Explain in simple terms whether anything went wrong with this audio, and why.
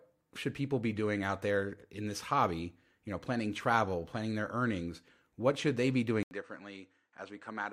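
Something does go wrong near the end. At 6.23 s, right after "what should they be", the sound cuts out for a split second, about 80 ms, then comes back duller, boxier and noticeably quieter, with a faint new background noise underneath, and stays that way until the clip finishes. That sudden change in character is the classic sign of an input switched to a poorer device, most likely the system jumping to another microphone or a headset that can't carry the crisp top end above 9 kHz.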